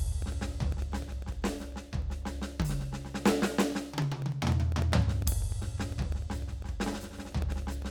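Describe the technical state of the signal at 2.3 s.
At 2.3 s the music is inside a run of periodic USB or driver dropouts lasting from 0.12 to 7.82 s. Every 0.1 s, something stalls the audio path. Roughly a millisecond is replaced by silence. Each gap sounds as an evenly spaced tick.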